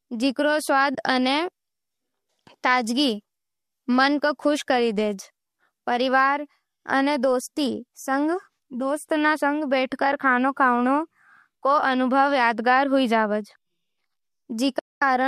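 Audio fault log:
0.95 s, AAC frame loss with muting: a brief soft-edged dropout of about 30 ms, fading out and back in. The decoder filled the missing audio with silence, and its overlapping windows smoothed the edges, which points to about three lost frames of roughly 10 ms each in the light low-delay AAC stream.
14.79–15.02 s, AAC frame loss with muting: a longer hole of about 230 ms near the end, again a gentle fade to silence and back rather than a hard cut. The sound was likely muted because a long run of consecutive frames never reached the decoder.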